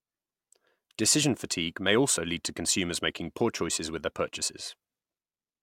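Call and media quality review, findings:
No faults found in the speech recording. Nothing in the audio calls for a ticket.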